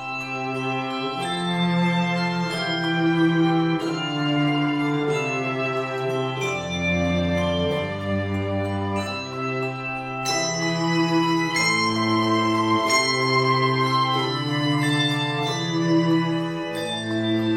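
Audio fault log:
No faults detected in this audio.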